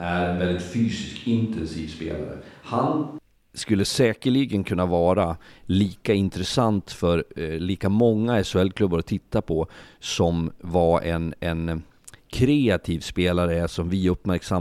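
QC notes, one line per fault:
0–3.18 s, switch to a distant microphone: already under way at the start, the close microphone's feed was likely lost and a far pickup used instead, so speech sounds roomy, hollow and thin, about 5 dB quieter, with faint room noise, until it abruptly returns close at "skulle säkerligen kunna vara".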